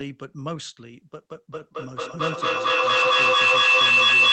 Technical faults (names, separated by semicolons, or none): feedback howl